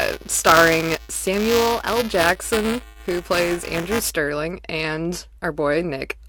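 Buffer tearing runs from 0.0 to 4.1 s: the writer and the hardware reader have slipped, so a small slice of each period replays audio from about 5 ms earlier with hard joins, giving a robotic 375 Hz buzz over the speech that fits a 128-sample buffer.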